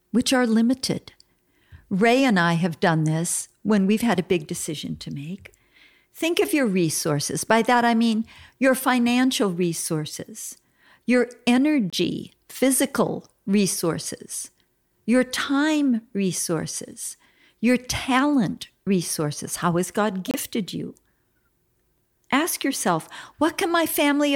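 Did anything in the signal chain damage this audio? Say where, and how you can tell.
Yes, at the codec stage: corrupt frames decoded at 11.90–11.94 s and 20.28–20.36 s, each a brief glitch, the second louder (near -10 dBFS). Flipped bits misplaced spectral energy for a few frames.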